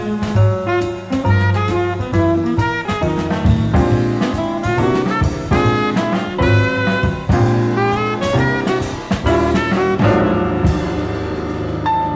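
No technical faults can be heard anywhere in this recording.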